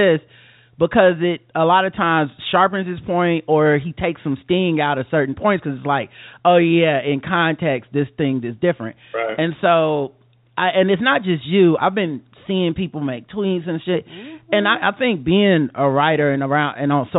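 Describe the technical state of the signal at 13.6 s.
At 13.6 s the speech is intact, with no dropout, glitch or distortion, just the narrow telephone band of the G.711 mu-law call path, which leaves nothing above 4 kHz.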